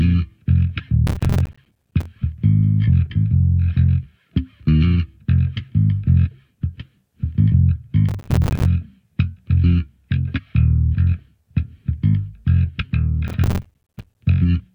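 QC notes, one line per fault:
1.07–2.06 s, processor overload crackle: a gritty burst of crackle as dozens of short buffers, each a few milliseconds, miss their deadline and drop to hard-edged silence.
8.09–8.66 s, processor overload crackle: briefer tearing crackle over the sound, from a run of missed buffer deadlines each leaving a tiny abrupt silent gap.
13.28–14.17 s, processor overload crackle: another stretch of crackling grit, caused by the processor repeatedly failing to fill short buffers in time, leaving sharp-edged dropouts.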